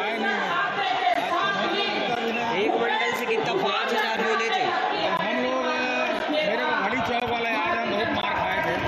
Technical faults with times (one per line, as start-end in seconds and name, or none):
1.14 gap between stream segments
2.15 gap between stream segments
3.16 gap between stream segments
4.17 gap between stream segments
5.17 gap between stream segments
6.19 gap between stream segments
7.20 gap between stream segments
8.21 gap between stream segments